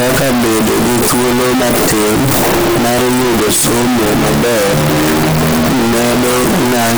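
From the first moment to the end, the speech sounds like float read as integer. The waveform sits as a near-square wave at an almost fixed, high level. Level no longer follows the original loudness. The cause is likely 32-bit float samples being read as 32-bit integers. Each sample's sign and exponent bits then set its value. The result is very loud and harsh. Background noise is as loud as the speech. Pitch can still be followed.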